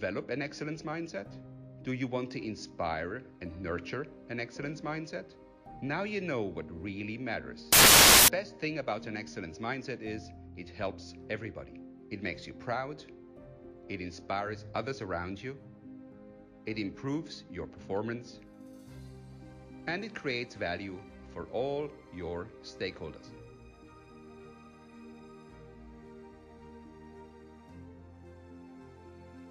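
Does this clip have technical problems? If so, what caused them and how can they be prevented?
Yes. From 7.73 to 8.28 s, roughly 0.56 s, the audio turns into loud, harsh broadband noise caused by samples built from the wrong bytes. The reader assembled each sample's bytes incorrectly, through a one-byte offset, swapped byte order or a mismatched alignment, so the rapidly fluctuating low-order bits landed in the most significant positions and dominated every value. Prevention: validate endianness, sample width and frame alignment against the stream header, and resynchronise on frame boundaries.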